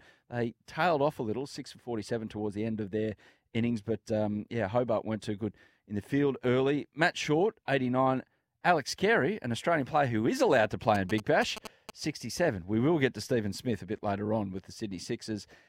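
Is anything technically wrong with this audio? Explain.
Yes. From 10.95 to 11.90 s, right after "who is allowed to", GSM signalling bursts intrude: a nearby phone's radio pulses are rectified by the audio circuitry into a galloping dit-dit-dit of short buzzes at about 217 Hz, roughly 10 dB below the speech. A spectrogram shows stacked 217 Hz harmonics in short clusters; the waveform shows spiky pulse groups.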